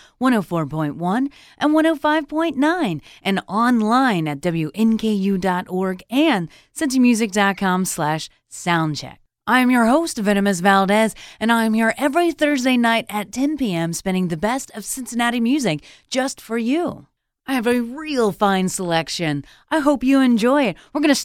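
Nothing in this speech recording stood out as a technical problem on listening.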